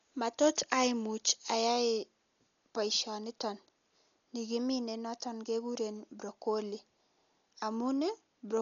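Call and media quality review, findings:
Speech dull and band-limited throughout, nothing above 6.9 kHz; rough, fluttering noise around voiced tones. Heavy codec damage, likely Dolby Digital compression, consistent with a bitrate near 40 kbps. Encoder narrowing the band and starving spectral lines of mantissa bits; decoder substituting dither noise, producing the flutter.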